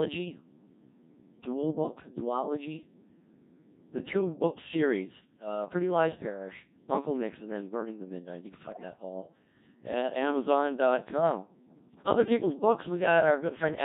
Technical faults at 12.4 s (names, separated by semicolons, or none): Codec 2 vocoder